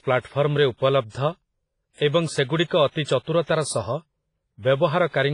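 Throughout the speech, heavy codec damage makes the sound ring and wash, with hiss that breathes with the signal. This is likely WMA compression, which fits a bitrate around 24 kbps. A spectrogram shows nothing above 10.4 kHz, and the upper bands look patchy where weak components were dropped.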